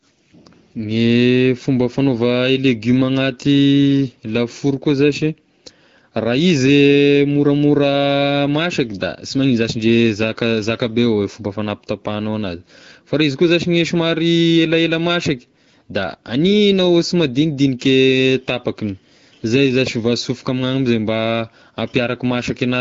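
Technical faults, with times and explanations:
No technical faults with times and explanations to report: the speech carries the light, clear sound of an AMR wideband (HD Voice) codec running at a rate that fits 12.65 kbit/s.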